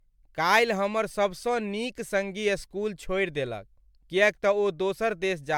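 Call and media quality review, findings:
Generation loss throughout the speech. Swirly, hollow sound, smeared attacks, nothing above 19.8 kHz. Likely repeated MP3 re-encoding, around seven passes near 136 kbit/s, noise compounding.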